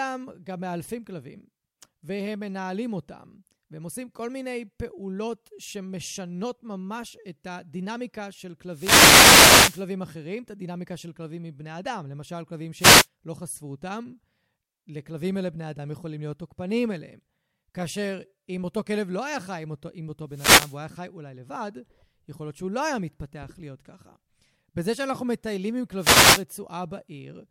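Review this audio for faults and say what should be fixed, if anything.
Four wireless microphone noise hits show up as bursts of static across the speech, at 8.70–9.87 s, 12.77–13.07 s, 20.29–20.79 s and 25.98–26.45 s. The FM link fades as reflections cancel, so receiver noise swamps the signal. Use diversity receivers and keep antennas in clear line of sight.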